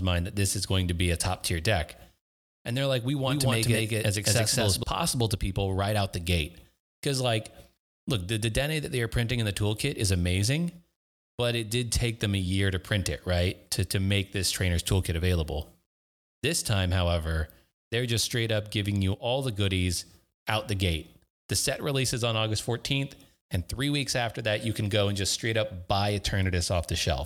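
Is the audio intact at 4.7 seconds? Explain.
No. A doubled audio track runs from 3.27 to 4.83 s, between "they're like we" and "to people right out". The speech is likely captured twice, so a second full-band copy at about equal loudness trails roughly a fifth of a second behind, with no room colour, starting and stopping abruptly.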